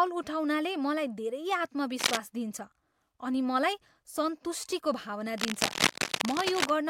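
Cable scratch noise breaks into this speech clip from 1.99 to 2.17 s and again from 5.38 to 6.71 s, a dense, ragged rustling laid over the sound at roughly the same loudness as the speech itself. The likely cause is a worn cable, connector or control being moved, so its contact resistance jumps about rapidly and injects these uneven noise bursts; the second episode lasts over a second.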